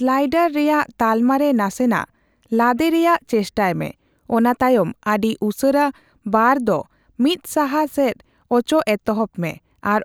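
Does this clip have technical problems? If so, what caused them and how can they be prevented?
No, there are no technical faults to be heard in this speech clip. Because nothing has gone wrong, there is no cause to trace and nothing that needs preventing.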